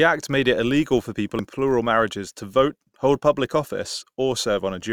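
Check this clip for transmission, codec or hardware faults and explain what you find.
Two faults are audible in this speech clip: a steady buzz running through the whole recording, and one brief glitch at 1.39 s.

Filter restarted on every block: a 100 Hz buzz sits under the speech throughout, pointing to blocks about 10 ms long. A filter is losing its memory at each block boundary and starting again from zero, leaving a tiny transient every time. Unlike mains hum, the buzz rises and falls with the speech level.

Damaged data in a compressed stream: at 1.39 s, between "it illegal for people" and "plural marriages to vote", there is a short blip. Corrupted bytes made the decoder misread a frame and resynchronise on the next header.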